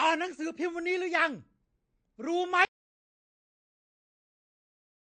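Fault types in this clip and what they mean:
MP3 compression: plainly audible watery, swirly coding damage across the speech with nothing above 9 kHz, likely from a low bitrate around 48 kbps.
Audio dropout to silence: the speech cuts off at 2.65 s into silence with no room tone, lasting to the end, likely from lost input.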